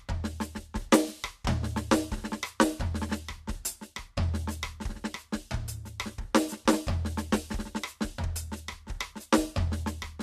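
No technical faults can be heard anywhere in this music recording. At no point does anything in the sound stand out as a technical problem.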